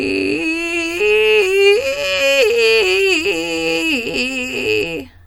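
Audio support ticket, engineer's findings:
No faults found in this music clip.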